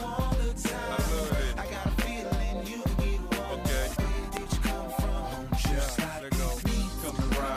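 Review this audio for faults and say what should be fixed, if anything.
Loud pops occur at 2.02–2.04 s, 3.33–3.35 s, 4.37–4.39 s, and as a pair of pops between 5.65 and 5.91 s. Each is a short, sharp transient standing roughly 15 dB above the surrounding sound, with the one at 3.33 s somewhat weaker at around 10 dB, while the audio continues unbroken beneath them. The likely cause is a voltage step reaching the signal path, for example from a connector being disturbed, a switch operating, a static discharge or a driver glitch. The downstream electronics turn that step into a brief thump.

To prevent these pops, secure all cables and connectors, avoid switching equipment during recording, and keep audio drivers and firmware up to date.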